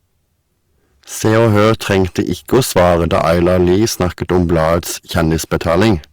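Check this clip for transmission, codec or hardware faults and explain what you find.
One fault runs through the speech: hard clipping. Throughout, peaks driven about 14 dB past the limit are cut flat, roughly one sample in twenty. The flat tops add high harmonics, a harsh fuzz on loud syllables, more abrupt than the rounded warmth of soft saturation.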